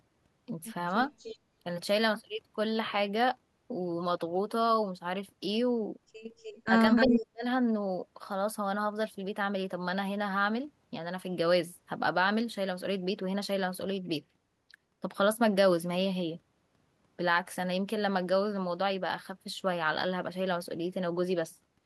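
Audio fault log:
1.18–1.38 s, 6.38–6.61 s and 6.96–7.16 s, echo leak: a copy of the speech returns 298 ms later, about 20 dB down at first and only about 5 dB down at 6.96 s. It is likely a far-end loudspeaker echo that the echo canceller did not remove. Unlike room reverb, it is a distinct repeat, not a smear.
6.66–6.72 s and 7.07–7.44 s, speech suppressed in double talk: the speech dips by about 20 dB, then by about 40 dB for roughly 0.4 s, while the far side's sound plays on the loudspeaker. This is likely the canceller ducking during double talk. It is not a packet dropout.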